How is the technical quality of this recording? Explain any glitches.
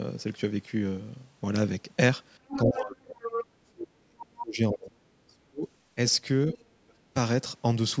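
The recording has two recurring call faults, both tied to the two sides talking over each other, heard through band-limited call audio with nothing above 8 kHz.

Other side's voice leaking through, at 2.48–2.87 s, 3.20–3.45 s and 4.21–4.26 s: the far end, played on a loudspeaker, likely got past the echo canceller into the microphone. The first two are strong, about 5 dB below the speech. The last is a faint scrap, about 20 dB down.

Speech suppressed in double talk, at 2.66–3.28 s, 3.54–5.00 s, 5.27–5.67 s, 6.53–6.63 s and 6.86–7.15 s: with both sides active, the canceller likely could not separate them and turned the talker down too. The speech drops by roughly 20 to 40 dB, nearly cutting out in the longest stretch.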